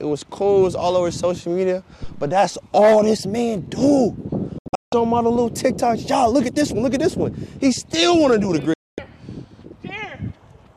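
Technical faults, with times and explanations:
4.58–4.93 s, digital broadcast dropout: the receiver stopped getting good frames and muted, with a fade of only about 3 ms, so the sound snaps off abruptly. It breaks up in several short holes totalling 288 ms, the longest 168 ms, and whatever was sent in those gaps is gone.
8.74–8.99 s, digital broadcast dropout: the same mute-on-bad-frames behaviour, here as one clean 240 ms hole with the same hard 3 ms edges before the audio picks up again.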